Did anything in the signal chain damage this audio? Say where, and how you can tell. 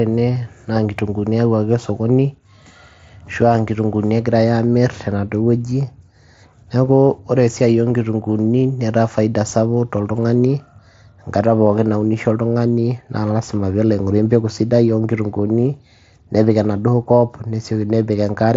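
Yes. At 0.35 s, just before "naa nkitung'uuni eyauwaki osokoni", there is concealed Bluetooth headset packet loss. It sits in the wireless link between headset and phone. One lost frame, about 7.5 ms, was filled by repeating the best-matching stretch of the preceding waveform, so it is almost inaudible. On a waveform the cycles just before the gap repeat with a slight phase seam. A spectrogram shows a brief smear where harmonics are held steady rather than moving. The mSBC headset codec carrying the call, with its 8 kHz ceiling, is audible as well.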